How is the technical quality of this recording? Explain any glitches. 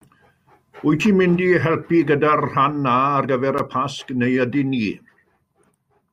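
The technical quality of this recording holds up, with no glitches to explain.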